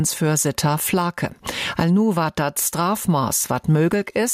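Gain pumping runs through the whole clip, with the level swinging by something like 15 dB. The likely cause is input gain set far too high, with a fast limiter or compressor clamping down on each peak. On a waveform the envelope looks flattened, with peaks of near-uniform height and a raised noise floor between them; a spectrogram shows broadband background bands brightening in the pauses and dimming under loud events.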